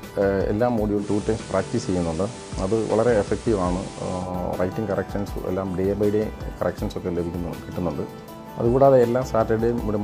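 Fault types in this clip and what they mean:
Digital radio blending to analogue: the receiver loses its digital stream and cross-fades to the station's FM analogue broadcast at 0.95 s, over about 152 ms, then returns to digital at 4.32 s. During that stretch a hiss floor appears, roughly 20 dB below the programme. The level stays matched across both transitions.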